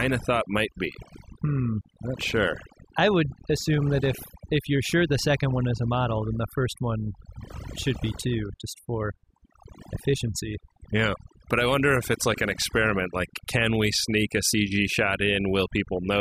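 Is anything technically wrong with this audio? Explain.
Yes. Throughout the speech, overdone noise removal over-suppresses frequency bands near the noise estimate, leaving twinkling specks in near-silent gaps, unlike a gate's whole-signal cutoff.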